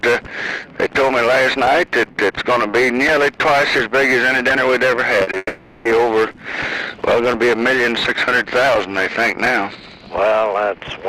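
At 5.23 to 5.29 s and again at 5.31 to 5.35 s there is short concealed packet loss. Gaps of 40 ms and then 20 ms were missing at the receiver. Each gap was bridged by extending the preceding sound and crossfading back into real audio. The two repairs come as a quick smear or wobble.

From 5.37 to 5.87 s the sound turns into a synthetic continuation lasting about 480 ms. It starts as a sustained buzz or hiss that decays, and it ends in roughly 10 ms of silence before real audio resumes with that half-second gone. The likely cause is a long network dropout, in which nothing arrived for half a second and the concealment filled most of the gap before running out.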